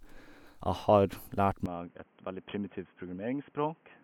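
At 1.66 s the speech suddenly turns dull and boxy and stays that way to the end, with nothing left above 3.3 kHz. It drops by around 10 dB and picks up a new background noise sitting roughly 30 dB under the voice, with no gap at the changeover. That combination sounds like the input switched to a poorer device, likely a narrowband mic or a headset's call profile taking over mid-recording.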